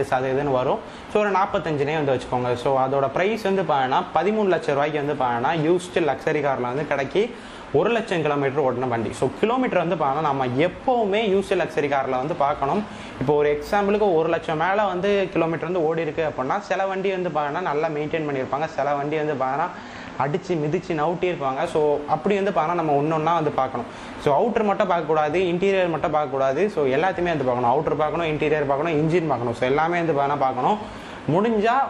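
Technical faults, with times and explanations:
15.59–21.68 s, digital radio blending to analogue: the receiver lost its digital stream and cross-faded over about 162 ms to the FM broadcast, then back. During that stretch the level drops about 2 dB, and hiss sits roughly 35 dB below the signal.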